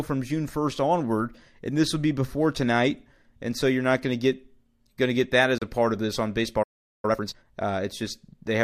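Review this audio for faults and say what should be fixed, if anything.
There's a digital broadcast dropout at 5.58 s, right after "going to get that": one lost frame mutes the speech for 32 ms, fading out over 3 ms before "a part of this" returns. Stronger reception or better error concealment in the receiver would keep that frame from going silent.

After "of this on baseball", the speech halts from 6.63 to 7.05 s, about 0.41 s of silence. That's a playback stall, likely the player running out of buffered data. A deeper playback buffer would ride out that gap.

Straight after, from 7.05 to 7.45 s, the player does time-compressed catch-up at 2x speed. The speech rushes at normal pitch. If the stall is prevented, this rushed catch-up won't happen.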